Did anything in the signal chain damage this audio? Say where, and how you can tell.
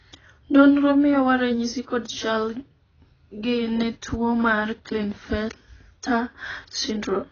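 Yes. The damage sits at the codec stage and runs through the whole clip: the speech sounds dull and smeared, with a fizzy, warbling texture on sibilants and held vowels. That points to AAC compression, likely AAC-LC at a very low bitrate, roughly 16 kbps, heavily quantising each frame's spectrum. On a spectrogram, everything stops at a hard shelf near 6.8 kHz, with blotchy gaps and patchy noise-filled bands below it.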